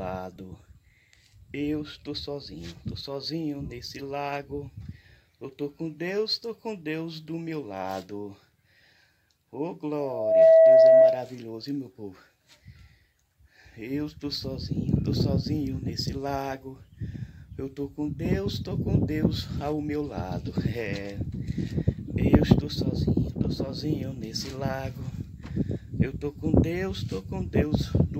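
Loudspeaker feedback squeal runs from 9.99 s to 11.33 s: a single tone near 649 Hz swells up over roughly 0.4 s and then holds at around 15 dB above the rest of the sound. A microphone was picking up the loudspeaker it was feeding, and at that one frequency the loop gave back more than it took in, so the tone fed on itself and grew until something limited it or the loop was broken.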